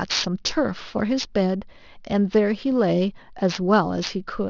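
Right from the start and all the way through, the speech has aliasing. It sounds like the rate was dropped, which fits a halving from 24 kHz to 12 kHz, without a low-pass filter first. Everything above the 6 kHz fold gets mirrored back down into the band as unrelated tones, sitting roughly 15 dB under the speech. You hear it most on the sibilants, which come out gritty and metallic instead of clean hiss.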